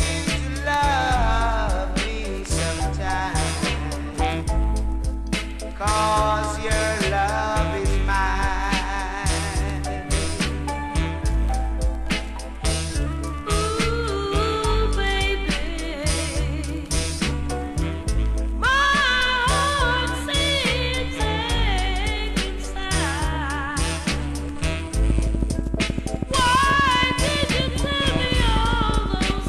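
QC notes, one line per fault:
25.10–29.48 s, train of clicks: a steady ticking runs over the sound right to the end, about 12.4 clicks a second, some fifty in all, each much the same and sticking out well above the audio. Likely interference or a faulty connection or power supply injecting pulses.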